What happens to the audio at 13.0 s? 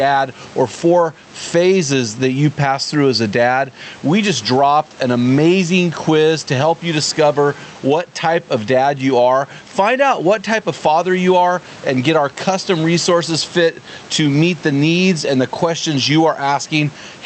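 Gain pumping runs throughout, including at 13.0 s. The level swings by about 10 dB and sounds squashed. A fast limiter on excessive gain is the likely cause.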